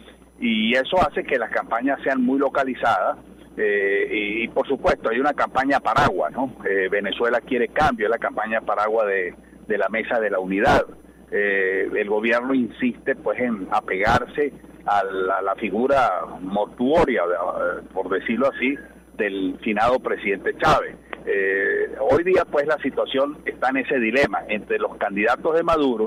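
Throughout, a USB whine sits about 45 dB under the sound: 1 ms bus frames leak through power or ground, giving a fixed tone at 1 kHz, peaking at its 10 kHz multiple, unlike 50/60 Hz mains hum.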